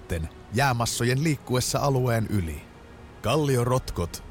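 No technical faults can be heard anywhere in the audio.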